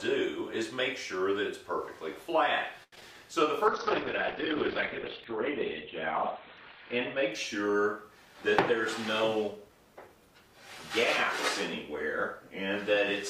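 At 2.83 to 2.93 s a short stall from a late packet holds the sound for about 89 ms with a faint buzz or dip. The jitter buffer ran dry, and playback resumed exactly where it stopped, so nothing is lost and everything afterward simply runs 89 ms later.

Right after, short concealed packet loss appears at 2.95 to 2.97 s and again at 3.00 to 3.15 s, about 30 ms in total. Unlike the stall, real audio is missing here. The receiver papered over the gaps with extrapolated sound, heard as brief smears, and the second patch adds a little extra length.

From 3.68 to 8.61 s a call bitrate drop takes the stream from 64 to 11 kbps, bottoming out for about 2.6 s. Audio bandwidth falls from 20 kHz to 4 kHz, so the sound turns muffled. Coarse coding also adds a watery roughness, which a simple low-pass filter would not produce.

At 9.22 to 10.08 s a jitter buffer speed-up plays the audio about 8% fast, trimming roughly 70 ms of pitch-period slices to reduce excess buffered delay. 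The passage sounds hurried, but its pitch stays put, which distinguishes it from a resampling or playback-rate error.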